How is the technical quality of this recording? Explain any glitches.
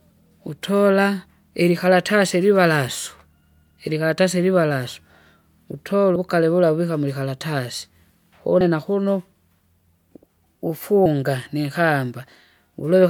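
The speech has three small skips where audio is missing between chunks, at 6.16 s just before "uvukale vula uvika mwikaratasi", at 8.61 s before "na kuno", and at 11.06 s. Each time roughly a twentieth of a second vanishes and the sound jumps ahead without a gap. The regular spacing fits a recorder likely working in 2.5 s chunks and dropping a short piece at each handover.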